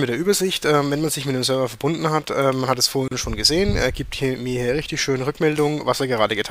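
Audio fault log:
3.08–3.11 s: gap at a join of encoded pieces. A 34 ms silence with smeared edges, left by untrimmed encoder delay and final-frame padding where two separately encoded sections meet.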